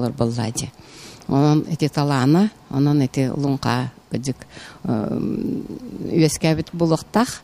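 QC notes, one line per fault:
Nothing stood out on listening, so there is nothing to log for this clip.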